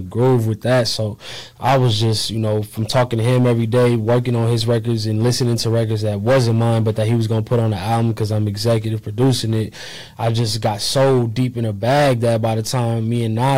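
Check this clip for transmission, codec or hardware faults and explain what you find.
Hard clipping runs throughout the clip. The signal is driven about 11 dB past what a stage can pass. Roughly 7 percent of samples hit the limit and are cut flat. Those flattened peaks add high harmonics. Every loud moment carries a harsh fuzz.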